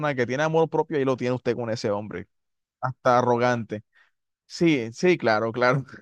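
A clock-matching stage likely made a drift correction step, slowing playback by about 5.7% from 2.14 to 2.80 s to rebalance its buffer. The speech drops roughly a semitone (about 101 cents) in pitch and drags, then snaps back.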